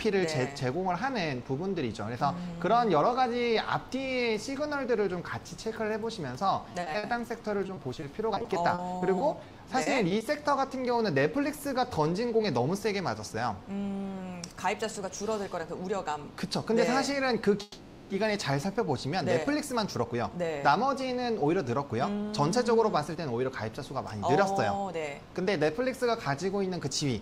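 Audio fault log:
6.69 to 7.30 s and 7.66 to 10.22 s, repeated packet loss (robotic sound): lots of short dropouts, none over 50 ms, each patched by stretching the last bit, so it goes choppy.
17.62 to 18.12 s, call audio freeze: the sound hangs as a fading buzz for about half a second, likely packets held up and the jitter buffer running dry, then picks up where it left off.
19.96 to 20.44 s and 22.57 to 23.56 s, jitter buffer speed-up: tiny pitch-period slices get cut to shed built-up delay, so it runs about 10% fast at the same pitch and feels hurried.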